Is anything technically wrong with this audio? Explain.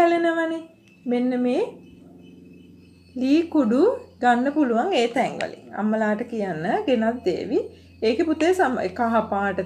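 Yes, a corrupt frame was decoded at 5.17 s, lasting about 26 ms. Flipped bits in what sounds like a single compressed frame were played back anyway, so misread codes placed energy at wrong frequencies. The result is a brief chirp-like burst peaking near -10 dBFS.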